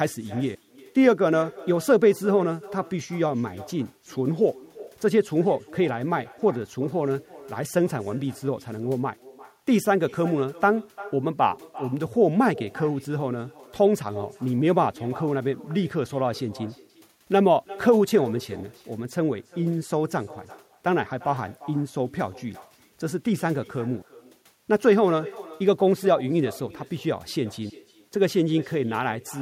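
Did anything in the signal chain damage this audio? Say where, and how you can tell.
Yes. The call processing stage has echo with no canceller throughout the speech: a thinner copy trails every phrase by roughly a third of a second, about 20 dB down. Room reverberation would smear continuously; this is one discrete, delayed repeat returning from the far-end loudspeaker.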